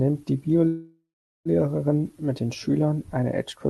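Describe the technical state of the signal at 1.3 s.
At 1.3 s the signal is inside a call audio freeze running from 0.67 s to 1.48 s. The sound stalls and the receiver stretches the last fragment into a fading buzz, which decays into silence for about the final 0.43 s of the span, so 1.3 s falls in that dead stretch. The likely cause is delayed packets draining the jitter buffer. When audio resumes it continues from where it stopped, with nothing lost, but about 780 ms late.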